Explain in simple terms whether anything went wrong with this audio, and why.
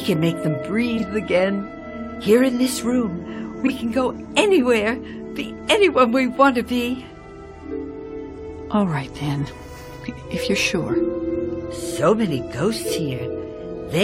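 Something did go wrong, twice: frames out of order, at 0.97 to 1.03 s and again at 3.64 to 3.70 s. Audio is sent in small blocks, here about 23 ms each, and in both spots two neighbouring blocks were played in swapped order. Each event lasts about 60 ms, consistent with single blocks trading places. That short stretch comes out as a brief garbled flutter. No time goes missing.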